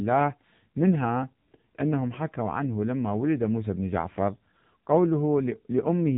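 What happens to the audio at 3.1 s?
At 3.1 s the speech sounds buzzy, thin and synthetic, with nothing above about 3.8 kHz, as it does throughout the clip. The cause is heavy AMR narrowband mobile codec damage: a coarse vocal-tract model consistent with a low bitrate near 6.7 kbps.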